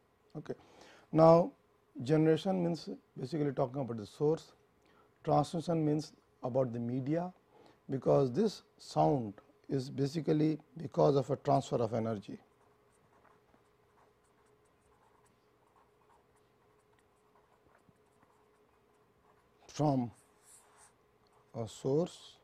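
No technical faults occur at any point in the clip, so there is nothing to describe in time order.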